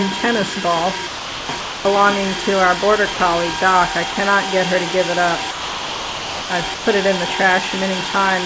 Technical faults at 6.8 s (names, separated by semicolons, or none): sound dropped by the voice detector